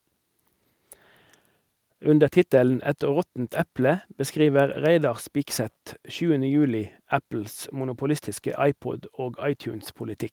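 No technical faults are audible anywhere in this recording.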